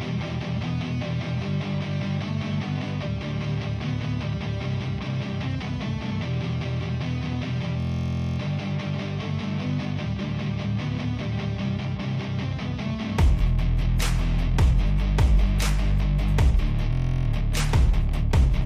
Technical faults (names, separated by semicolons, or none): system hang loop